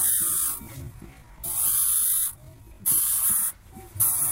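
From the start to 3.02 s the audio runs at about 0.6 times its normal pace, then snaps back. It drags while keeping its pitch, which sets this time-stretched section apart from a plain slowed playback, where pitch would fall. Software likely lengthened it by repeating short pieces.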